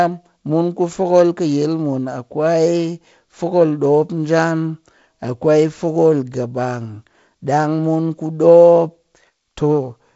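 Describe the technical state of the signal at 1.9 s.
At 1.9 s the speech is intact, carried by G.722 wideband telephone coding with no fault at that moment.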